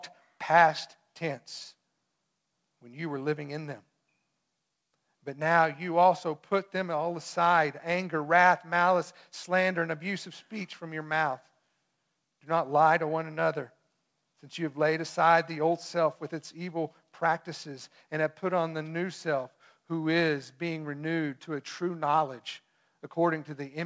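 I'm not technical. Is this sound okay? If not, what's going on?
Yes, no faults heard; the speech went through a G.722 call link, which normally stops everything above 8 kHz, so the slightly dull top end is expected for a call.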